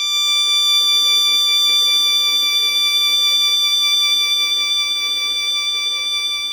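No technical faults can be heard in this music.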